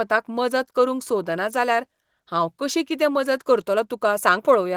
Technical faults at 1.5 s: none

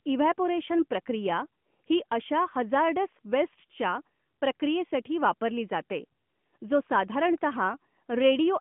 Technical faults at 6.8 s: none

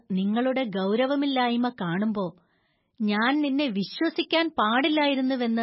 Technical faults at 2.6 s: MP3 compression

